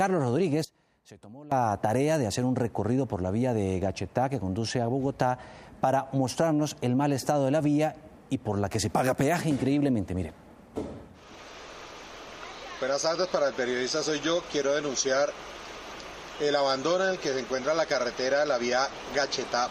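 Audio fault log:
0.65–1.52 s, one channel inverted: the sound drops by about 20 dB and turns faint, leaving only the difference between channels. The likely cause is one stereo channel with reversed polarity, so everything common to both cancels when summed to mono.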